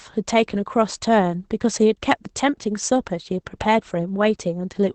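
It's a short speech clip with Opus voice compression across the whole thing. Nothing comes through above about 8.5 kHz, so the top end is just gone, which points to Opus running SILK's linear-prediction coder in wideband mode. The excitation is coded coarsely enough that the voice sounds muffled, a bit hoarse and faintly robotic, and that level of damage fits a low bitrate of around 12 kbps.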